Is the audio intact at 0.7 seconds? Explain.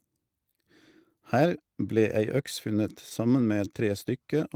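Yes, the speech at 0.7 seconds plays through cleanly with no audible fault at that moment.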